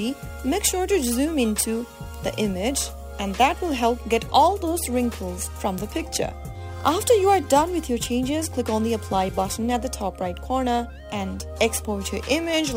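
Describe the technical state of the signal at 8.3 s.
At 8.3 s you're hearing crude rate conversion, present throughout: samples simply repeated, which fits a 44.1 kHz to 48 kHz jump, leaving a gritty inharmonic fizz roughly 20 dB under the sound.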